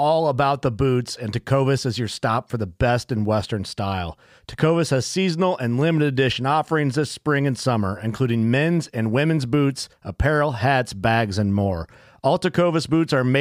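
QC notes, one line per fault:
Nothing stood out on listening to this speech recording.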